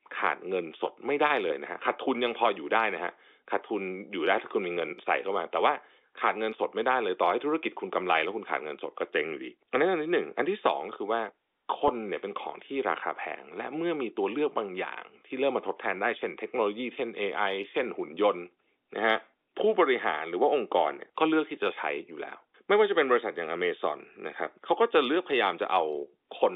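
At 11.88 s there's a brief packet loss with pitch repetition. About 10 ms drops out, which fits a single lost packet, and the receiver fills it by repeating the last pitch period. You hear a tiny held, slightly buzzy blip in the speech before it carries on, all within the narrow G.711 telephone band.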